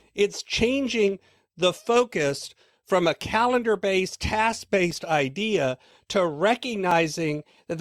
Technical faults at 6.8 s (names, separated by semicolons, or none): periodic USB or driver dropouts